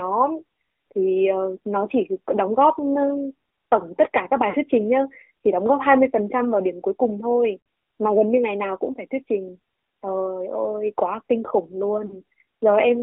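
Throughout, the speech has passed through the AMR narrowband mobile codec. Only about 300 Hz to 3.5 kHz survives. The codec rebuilds each frame from a vocal-tract model and a few pulses. The resulting buzz and synthetic edge are plainly audible, which fits a mid-rate mode near 10 kbps.

Lost AMR speech frames then break the sound three times. At 4.50 to 4.56 s, about 40 ms is lost, which fits two 20 ms frames. At 7.60 to 7.66 s, the gap is about 60 ms, likely three frames. At 12.06 to 12.20 s, about 40 ms is lost again. Each time, the decoder repeats the last good pitch and vocal-tract settings at falling gain. The result is a short smeared dip or warble, and the speech returns rough for a moment.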